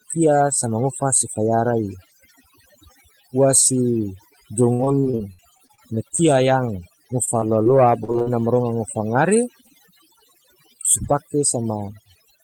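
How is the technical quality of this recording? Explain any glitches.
The recording has two faults. Overdone noise removal affects the whole clip: aggressive spectral gating silences bands near the noise estimate, leaving near-silent background with twinkling specks. Repeated packet loss makes the sound robotic from 4.73 to 6.21 s and from 7.25 to 8.28 s. Short losses, up to 57 ms, are patched by extending the previous sound, producing choppy fragments.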